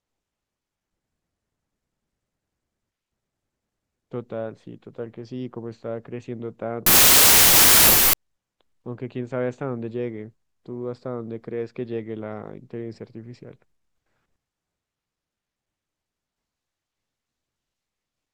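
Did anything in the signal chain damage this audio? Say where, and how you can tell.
Yes. Between 6.86 and 8.13 s the speech collapses into loud, dense noise with the original sound faintly audible underneath, running at 0.75 times normal speed and correspondingly lower in pitch. That is a wrong sample width fault at the sample-format conversion stage, and the pattern fits 32-bit integer samples being read as packed 24-bit. Each 3-byte read straddles the original 4-byte boundaries, so most values are assembled from mismatched bytes and only some carry the real signal's top bits. The extra samples this produces stretch the segment out.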